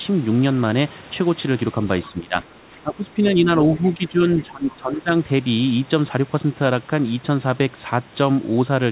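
From 2.09 to 3.49 s the speech sinks and breaks up, for about a second in total, dropping by roughly 15 dB at its deepest. It dips again from 3.76 to 4.2 s, by around 10 dB, and from 4.42 to 5.1 s, by roughly 15 dB. This is likely speech suppressed in double talk. The echo canceller mistook the near talker for echo while the far side spoke, and turned the speech down. The sound stays narrowband throughout, with nothing above 4 kHz.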